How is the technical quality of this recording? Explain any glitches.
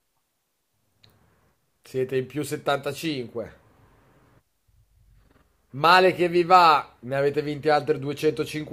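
The recording has no audible glitches. Nothing in the speech stands out as a technical problem at any point.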